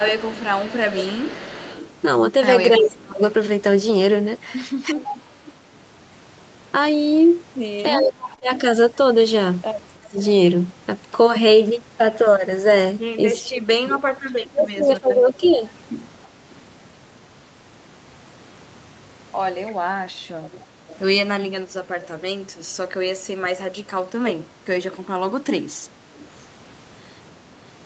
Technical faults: echo leak; speech suppressed in double talk; short concealed packet loss; lost packet rebuilt from error correction

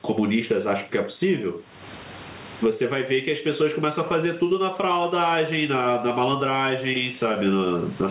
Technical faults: gain pumping

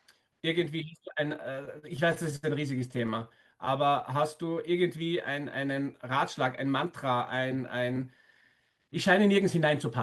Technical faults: repeated stalls (stutter); jitter buffer slow-down

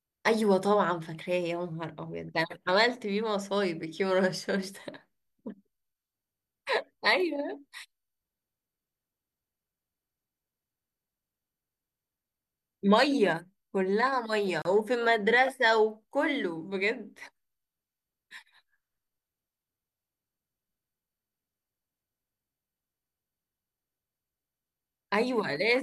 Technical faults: gap at a join of encoded pieces

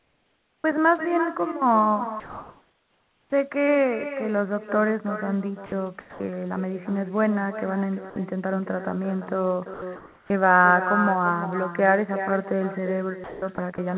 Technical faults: echo with no canceller; comfort noise in place of the background; onset clipped by the voice detector; sound chopped by the voice detector; sound dropped by the voice detector

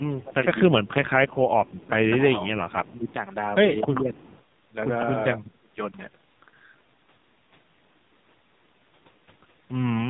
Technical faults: AMR narrowband mobile codec; speech suppressed in double talk; echo leak

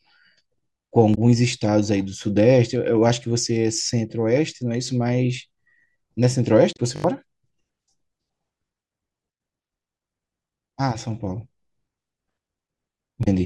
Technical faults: damaged data in a compressed stream; repeated buffer

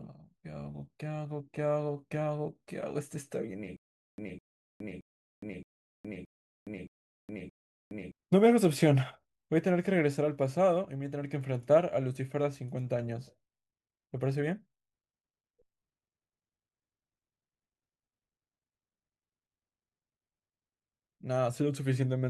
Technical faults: stutter with silent gaps

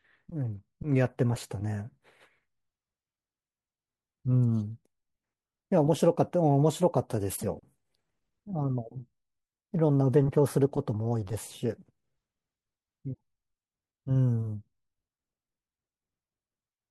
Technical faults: damaged data in a compressed stream

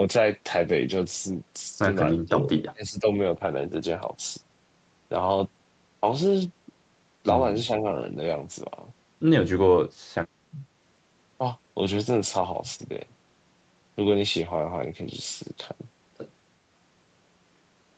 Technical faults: speech suppressed in double talk

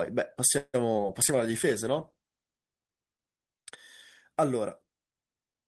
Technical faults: call audio freeze; call bitrate drop

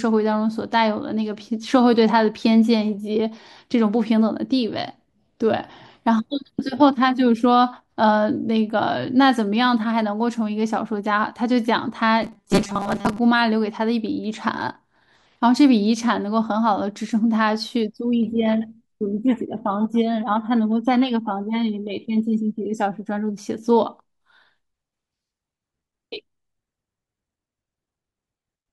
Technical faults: robotic sound from repeated short buffers

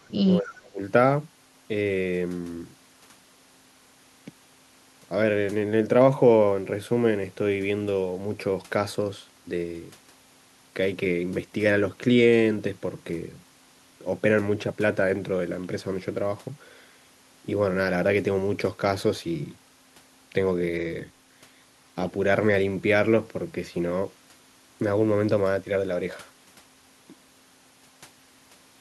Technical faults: speech suppressed in double talk

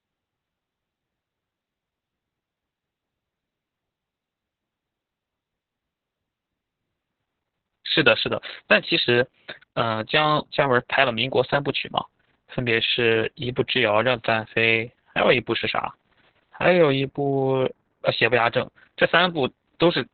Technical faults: Opus voice compression

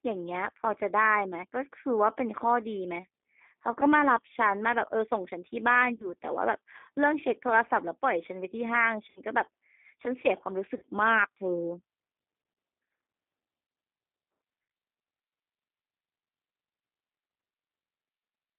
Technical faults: G.729 codec; VoIP packet loss concealed by the speech codec

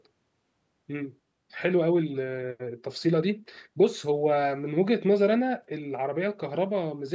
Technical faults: none

